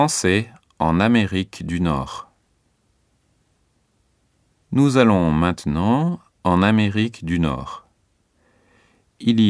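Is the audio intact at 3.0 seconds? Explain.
Yes, the speech at 3.0 s plays through without any audible fault.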